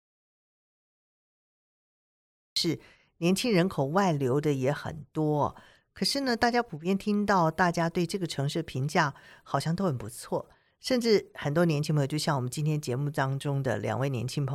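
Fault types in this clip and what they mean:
Audio dropout to silence: The speech clip opens in silence that is already under way when it begins. It lasts until 2.56 s, and the speech then enters abruptly, mid-flow. The gap holds no room tone or hiss at all. The likely cause is a lost input, such as a disconnected device, a failed link or a stray mute, while recording carried on. Anything spoken during that stretch is gone.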